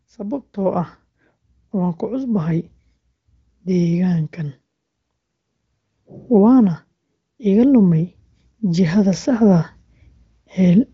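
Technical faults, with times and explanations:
7.37 to 9.67 s, automatic gain rising: the gain control judged the input too quiet and raised its gain by about 5 dB over more than two seconds. The speech and the background swell up together, the level climbing steadily rather than jumping. The wideband HD Voice codec beneath stays clean, with nothing above about 7.5 kHz.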